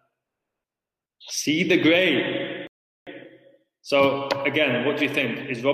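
At 2.67 s the sound drops to silence. This is a rebuffering stall. The player ran short of downloaded audio and waited for more. At 3.07 s playback picks up exactly where it stopped. Nothing is skipped, but about 0.4 s of dead air is inserted.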